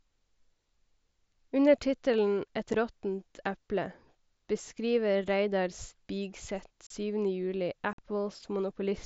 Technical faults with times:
2.73 unconcealed Bluetooth headset packet loss
6.87-6.91 unconcealed Bluetooth headset packet loss
7.93-7.99 unconcealed Bluetooth headset packet loss

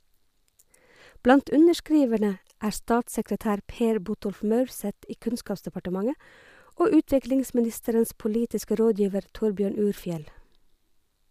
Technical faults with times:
none

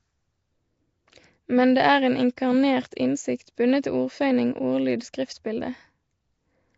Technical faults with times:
0.00-6.77 Nellymoser compression
2.36 pre-echo
3.82 pre-echo

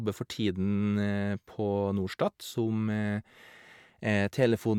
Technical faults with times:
none

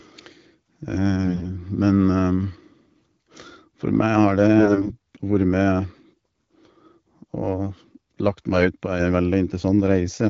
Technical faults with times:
1.24-1.45 AMR bit errors
4.58-4.92 AMR bit errors
8.86-9.00 sudden gain jump

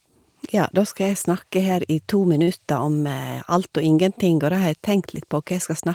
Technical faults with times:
2.43-2.50 short stall from a late packet

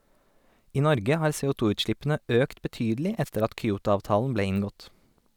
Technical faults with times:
3.25-3.29 wireless microphone noise hit

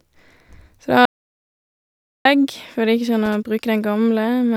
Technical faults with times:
1.05-2.25 audio dropout to silence
3.25-3.35 loose connector crackle

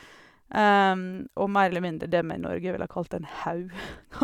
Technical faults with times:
none

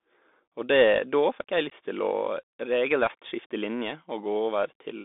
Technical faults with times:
0.00-5.05 Bluetooth CVSD headset codec
1.70-1.73 unconcealed Bluetooth headset packet loss

